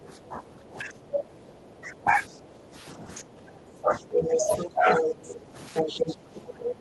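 From the very start and right through to the end, the talker's speech keeps sinking and thinning, at worst by something like 15 dB, with the top end going dull and bits breaking off. That's speech suppressed in double talk: both ends were talking at once, and the echo canceller most likely couldn't tell the local voice from the loudspeaker echo, so it pulled everything down together instead of just the echo.

Layered on top of that is the other side's voice leaking through. First comes a tiny scrap at about 0.88 to 0.99 s, faint, maybe 25 dB under the talker. Then from 4.04 to 5.4 s, and again from 5.74 s to the end, a second voice sits at roughly the same level as the talker, so it's hard to miss. It sounds like the far end playing on the talker's loudspeaker and likely getting back into the mic because the canceller didn't strip it all out.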